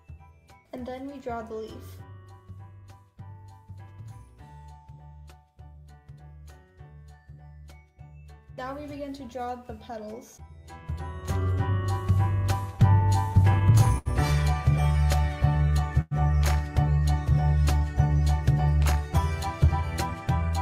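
From 12.61 to 14.08 s the sound stutters repeatedly. This is repeated stalls, or stutter. Packets kept arriving late, and the jitter buffer ran dry eleven times. Each gap was bridged by continuing the last sound, the longest for 73 ms. Nothing is lost, but the passage drags.

Between 14.92 and 15.72 s comes a jitter buffer slow-down. The buffer was short of audio. The receiver repeated single pitch periods to rebuild its reserve, adding 81 ms. The sound plays at 91% speed, stretched but at unchanged pitch.

At 16.01 s there is a call audio freeze lasting until 16.14 s. The last sound is held as a fading buzz or hiss for about 100 ms. It ends in a brief 10 ms silence. Packets were likely held up in transit. The audio then resumes where it stopped.

From 18.92 to 19.19 s there is a jitter buffer speed-up. Too much audio had built up in the buffer. The receiver trimmed short pitch-period pieces, about 50 ms in all. 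The sound runs at 115% speed and feels hurried, with pitch unchanged.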